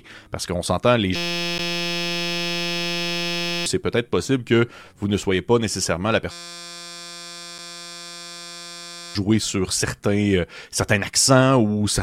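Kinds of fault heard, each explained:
System hang loop: a 5.8 ms slice, fitting a 256-sample buffer, repeats as a steady 172 Hz buzz; the waveform shows identical cycles, the spectrogram evenly spaced harmonic stripes.
Gap between stream segments: hard-edged silences of about 10 ms at 1.58 s and 5 ms at 7.58 s, seen as flat dropouts and thin blank vertical slivers.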